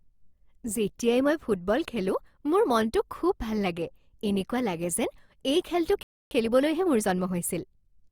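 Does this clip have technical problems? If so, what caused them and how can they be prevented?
Yes. A playback stall cuts the speech off just after "এই খেলটো", leaving silence from 6.03 s to 6.31 s, a gap of about 280 ms before the sound resumes. The player likely ran short of buffered data or had its output thread blocked, so nothing reached the output until it recovered. Keeping a deeper playback buffer and running the audio thread at high priority, free of blocking work, prevents this.

Time-compressed catch-up follows from 6.31 s to 7.99 s. The player removes its backlog by excising short segments and cross-fading the joins, so the speech runs about 1.15 times faster at its normal pitch. This is the direct consequence of the preceding stall. Eliminating the stall removes the need for catch-up, and a gentler compression rate makes any remaining catch-up less audible.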